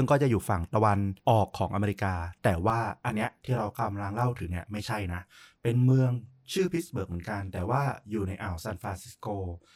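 From about 2.70 s to the end, the speech turns rough and slightly doubled. This is channel delay (comb filtering). One channel runs late by roughly 20 ms, and when the two are folded to mono, the parts they share cancel at regularly spaced frequencies. The result is a dense comb of fixed notches, the first down around 20 Hz, stretching across the spectrum.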